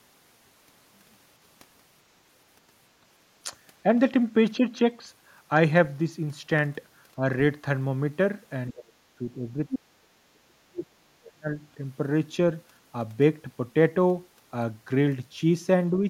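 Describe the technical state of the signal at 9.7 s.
Speech suppressed in double talk runs from 8.71 to 9.93 s. The talker's speech sinks by roughly 30 dB, in pieces totalling about a second, likely because an echo canceller, unable to tell the talker from loudspeaker echo during overlap, attenuated everything.

The other side's voice leaking through appears from 9.71 to 9.75 s as a brief scrap sitting about 10 dB below the talker's level, likely residual loudspeaker echo that the canceller failed to remove from the microphone signal.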